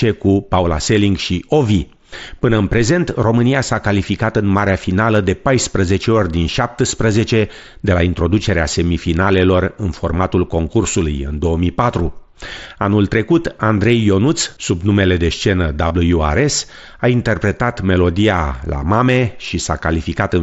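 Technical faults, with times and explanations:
15.88 to 15.91 s, concealed Bluetooth headset packet loss: about 22.5 ms of audio never made it from headset to phone, roughly three frames' worth. The receiver filled it by repeating the closest-matching slice of recent waveform, so you get a brief buzzy hold and a slight warble as real sound resumes through the mSBC link.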